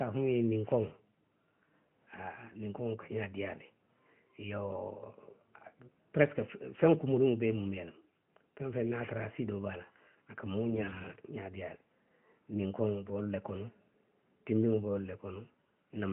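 A speech recording, band-limited at 4 kHz by a narrowband mobile codec, carries AMR bit errors from 10.70 to 11.19 s. Over that half second, flipped low-priority bits, which fits an error rate of a few percent, misplace the excitation pulses and skew the fine gain and spectral values, so the voice keeps its pitch and loudness but turns hoarse and gargly. On a spectrogram the harmonics there smear into speckled noise, while the waveform's envelope stays level.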